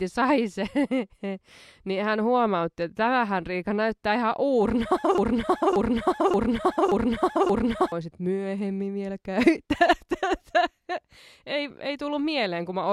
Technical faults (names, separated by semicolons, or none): broken-record loop